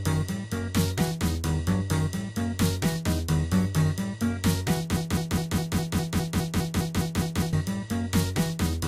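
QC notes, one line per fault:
4.96–7.53 s: broken-record loop, a 0.2 s fragment repeated exactly 13 times with no decay, unlike echo; likely a stalled player, encoder or stream, the intended sound lost.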